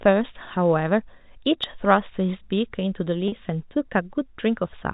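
Speech over a G.711 telephone path, band-limited below 4 kHz, has one fault. At 3.28 to 3.32 s there is packet loss with pitch repetition. About 40 ms of audio drops out, which fits two lost 20 ms packets. The receiver bridges the gap by repeating the last pitch cycle, so the sound briefly holds with a slight buzz before it resumes.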